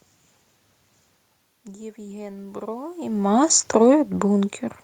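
Automatic gain rising runs from 1.64 to 3.37 s. After the level at the microphone drops by about 17 dB, as the talker moves back around the one-second mark, the gain control climbs about 9 dB over nearly two seconds, so speech and room noise swell up together.

Automatic gain falling follows from 3.33 to 4.64 s. When the talker comes closer again around three seconds, the raised gain now overshoots, and the control backs off by about 4 dB over more than a second, so speech and background sink together.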